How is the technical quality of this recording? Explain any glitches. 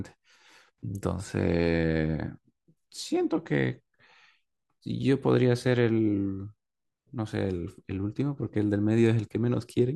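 No glitches can be heard anywhere in the recording. The speech runs without any audible interruption or disturbance.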